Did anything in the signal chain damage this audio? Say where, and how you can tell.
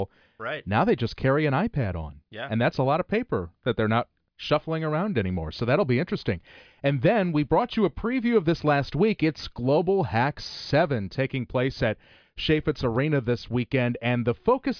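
No, nothing along the chain has left an audible mark on this speech recording; the signal holds steady, with no dropouts, clipping, gaps or glitches anywhere in it.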